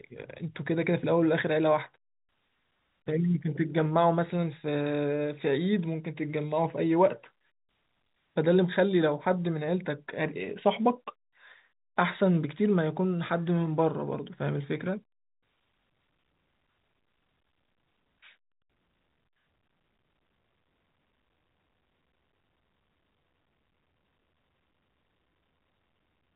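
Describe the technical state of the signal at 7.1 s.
At 7.1 s the speech is intact, carried through G.711 telephone coding whose band ends at about 3.8 kHz.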